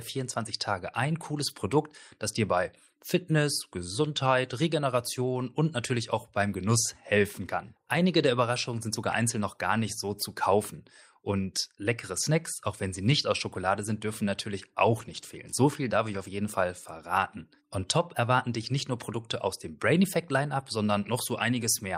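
Lost packets rebuilt from error correction occur at 1.49–1.51, 13.81–13.83, 14.97–15.23, 16.13–16.19 and 20.59–20.61 s. The speech never gaps. Decoded low-bitrate copies fill in, sounding briefly rough and noisy. The longest, 140 ms, fits several consecutive lost packets.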